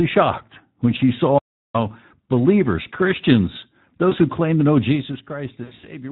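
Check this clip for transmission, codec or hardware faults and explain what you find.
Two faults are present: Speex coding damage across the whole speech clip, and three packet-loss gaps concealed by the decoder.

Speex codec, throughout: the speech has a hoarse, noisy grain, which points to an encoding rate around 11 kbps. At that rate the CELP excitation gets few bits, so fine voice detail is replaced by a rough approximation. This differs from MP3-style transform artefacts: there is no watery swirling or pre-echo, only a buzzy, coarse quality.

VoIP packet loss concealed by the speech codec, at 0.97–1.00 s, 4.09–4.15 s, and 5.63–5.87 s: the decoder filled missing audio by extending its last pitch and filter with falling gain. The first two fit a single lost 20 ms frame and give a brief stretched smear. The third spreads about 140 ms of loss over roughly 200 ms, with a longest run near 80 ms. 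That produces a fading sound and weak, distorted speech that lingers after packets resume. Unlike a plain dropout, the gaps are filled by the decoder rather than left empty.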